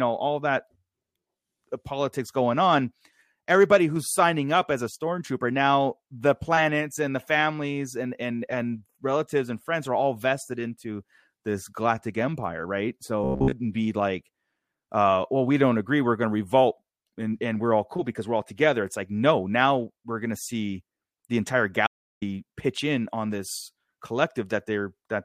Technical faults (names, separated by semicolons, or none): robotic sound from repeated short buffers; audio dropout to silence